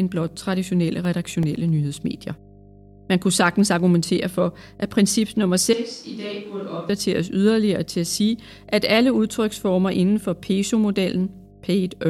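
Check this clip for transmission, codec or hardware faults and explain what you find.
Three faults are present: a continuous hum, a short burst of disc ticks and a brief change of microphone.

Mains hum runs through the whole clip. A ground loop or nearby transformer has let the 50 Hz power line leak into the signal path, leaving a steady low tone with some low harmonics about 25 dB below the speech.

CD scratch ticks appear from 0.92 to 1.69 s. A flaw on the disc destroyed more data on each rotation than error correction could rebuild, so the player patched the gaps. The result is seven regular clicks, each lasting no more than a couple of milliseconds.

A switch to a distant microphone occurs from 5.73 to 6.89 s, right after "for at princip nummer", and it returns before "yderligere til at sige". The close microphone's feed most likely dropped out and a farther one took over. The speech suddenly becomes hollow and roomy, thinner in the bass and about 10 dB quieter, with room noise rising to around 25 dB below the speech.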